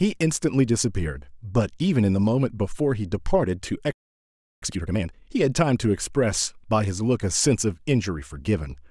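A playback stall runs from 3.92 to 4.62 s. The speech cuts off in mid-flow and the output falls completely silent for about 0.7 s, then resumes. A gap like this, dropping out mid-phrase rather than at a natural pause, is likely caused by the player running out of buffered data or having its audio thread blocked, so it had nothing to send to the output until it recovered.

Time-compressed catch-up follows from 4.62 to 5.30 s. Having fallen behind during the stall, the player works off its backlog by cutting out short pieces of the signal and cross-fading across the joins. Here it plays at 2.0 times normal speed for those 0.68 s, so the speech sounds rushed yet keeps its normal pitch.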